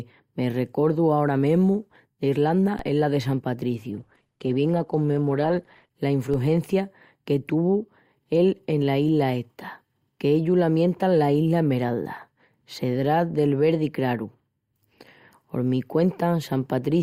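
At 2.79 s, just before "es la de", a DC step shifts the waveform's zero line abruptly, as if an offset had suddenly entered the signal path. It is heard as a short low thump under the speech. The offset then drains away through a high-pass filter at about 20 Hz, so the waveform shows a sudden baseline jump that slopes back to centre. A spectrogram shows a brief broadband vertical line strongest at the bottom.

From 3.90 to 5.90 s an adaptive stream drops to a lower bitrate for two seconds, with no gap at either switch. The treble turns thin, and coding artefacts grow. The sound points to Opus falling from around 64 kbit/s to around 16 kbit/s. On a spectrogram the content above 12 kHz vanishes for exactly that span, leaving a flat ceiling with hard edges where full bandwidth resumes.

A second DC step at 6.34 s behaves the same way: another low thump, a jump in the baseline, and a decay back toward zero through the 20 Hz high-pass.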